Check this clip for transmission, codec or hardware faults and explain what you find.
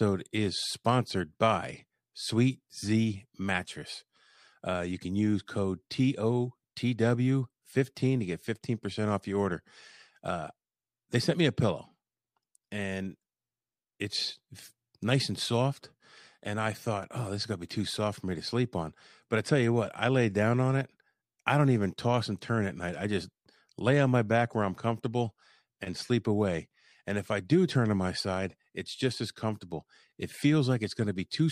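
Nothing stood out on listening to the speech in this recording.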